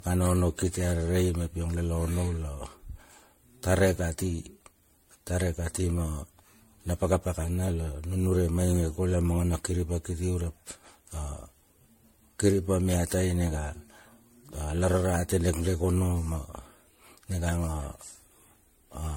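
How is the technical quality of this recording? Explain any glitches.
The recording has one fault that runs through the whole clip: generation loss. The speech sounds swirly, hollow and smeared, with softened consonant attacks and nothing above 16.5 kHz. This is likely the result of the audio being decoded and re-encoded as MP3 about ten times, at rates that point to roughly 62 kbit/s. Each pass quantises on a shifted frame grid, so noise and spectral gaps build up. A single encode at that rate would sound cleaner and less blurred.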